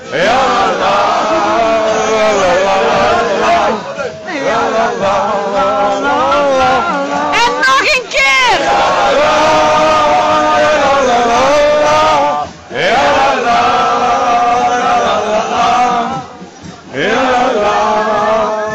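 Right near the end, at about 16.72 s, there's a short burst of damaged data in the compressed stream, lasting roughly 50 ms to 16.77 s. Some bytes in that stretch of the encoded file got lost or scrambled, so the decoder misread those frames, lost sync, and had to hunt for the next valid frame header before carrying on. What you hear is a quick glitch cutting across the sound before it settles back down.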